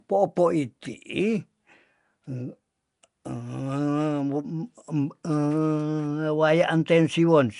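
Throughout this speech clip the audio carries a rough, hissy halo and a smeared, underwater quality, and nothing is present above 10.6 kHz. The likely cause is Nellymoser compression, the old Flash microphone codec, which codes short fixed blocks with very few bits per sample. It gives weak frequency bands no bits and fills them with noise, producing the hiss and smear heard here. The damage is plainly audible and fits a bitrate of about 44 kbps.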